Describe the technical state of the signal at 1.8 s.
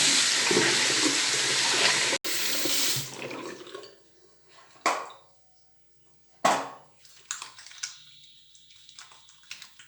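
At 1.8 s the recording is still coming from what is likely a poorer input device, a fault known as input switched to a poorer device, which runs from the start to 2.25 s. The substitute path passes nothing above 11.4 kHz, so the sound is duller and boxier. It carries its own faint noise floor, roughly 50 dB down, and sits at a different level, by roughly 5 dB. An 80 ms silence marks the switch back.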